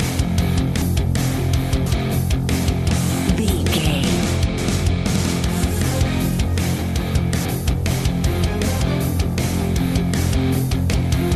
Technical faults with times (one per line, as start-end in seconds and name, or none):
0.81 compressed frames skipped
1.86 compressed frames skipped
2.90 compressed frames skipped
4.57 compressed frames skipped
7.45 compressed frames skipped
10.92 compressed frames skipped